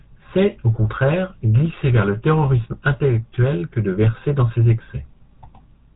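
From start to finish the speech carries the signature of the GSM full-rate codec. The vocal tract is modelled as a filter, and the excitation driving it is rebuilt from regularly spaced pulses that keep only every third sample. That gives the voice a buzzy, gravelly roughness, which is plainly audible here. Nothing passes above 3.8 kHz, so the whole clip sounds narrowband. The bitrate likely sits near 13 kbps. On a spectrogram, energy stops at a hard ceiling around 3.8 kHz, and the harmonics below it look smeared and grainy.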